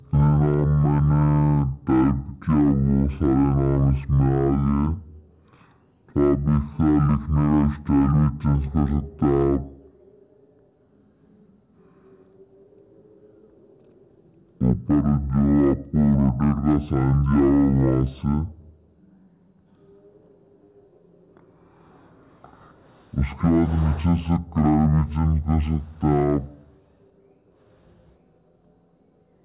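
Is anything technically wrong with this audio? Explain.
Yes. A wrong sample rate runs throughout: the sound plays at half speed and a full octave (12 semitones) low, which fits 16 kHz material read at 8 kHz with no conversion. Because speed and pitch drop together, it differs from time-stretching or pitch-shifting, which change only one.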